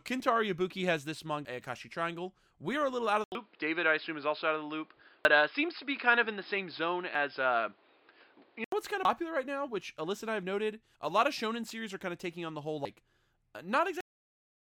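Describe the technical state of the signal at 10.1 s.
At 10.1 s the speech signal is intact, with no audible fault at that point.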